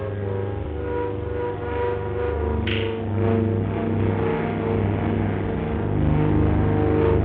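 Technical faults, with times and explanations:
0.61 to 0.65 s, damaged data in a compressed stream: for about 44 ms the sound breaks, because part of the encoded stream at this point is corrupt. The decoder cannot read those frames correctly, either misinterpreting them or discarding them, and loses its place in the stream until it finds the next valid frame header. What comes out in that gap is whatever the decoder made of bad data, a chirp, squawk, click or brief hole, before normal decoding resumes.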